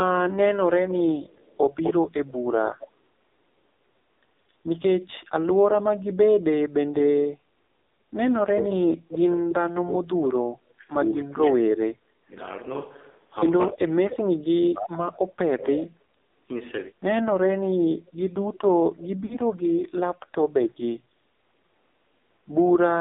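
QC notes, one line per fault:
Throughout, AMR narrowband mobile codec: The call passed through AMR-NB, and the heavy coding damage points to its low 5.9 kbps mode. The line carries only about 250 Hz to 3.7 kHz. With so few bits, a vocal-tract model driven by sparse pulses rebuilds the speech. It comes out thin, muffled and noticeably buzzy and synthetic, with no air or sibilance above the band edge.
1.27–1.93 s and 18.06–18.12 s, echo leak: The far end's echo canceller likely failed to remove its own loudspeaker signal, so part of the speech returned down the line. At 1.27–1.93 s a copy trails the speech by 252 ms at roughly 10 dB below it, heard as a doubled slapback. At 18.06 s a much fainter scrap, around 35 dB down, arrives 321 ms late as a brief ghost.
8.43–12.34 s and 13.72–16.16 s, speech suppressed in double talk: With both sides talking at once, the echo canceller likely could not tell this talker from its loudspeaker echo and turned the speech down. 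Over about 3 s in the first span the level drops by as much as roughly 40 dB. Over about 2 s in the second it drops by as much as about 35 dB. The speech dips, thins and cuts out in pieces.
19.26–19.37 s, lost AMR speech frames: Radio errors corrupted about 40 ms of speech, which fits two lost 20 ms frames. The decoder filled the gap by repeating the last good pitch and vocal-tract settings at falling gain. This causes a short smeared, warbling stretch that sags in level, and the speech comes back briefly weak and rough.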